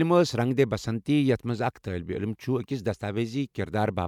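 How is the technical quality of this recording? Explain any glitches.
No glitches are audible anywhere in the recording, so there are no faults to explain.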